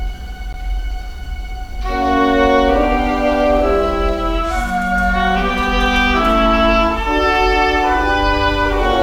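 At 0.53 s, a gap between stream segments: the timestamps of two 6 s segments leave about 14 ms unfilled, so the music drops into a hard-edged silence, then resumes.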